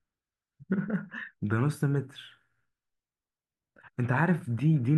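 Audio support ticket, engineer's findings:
No faults found on listening.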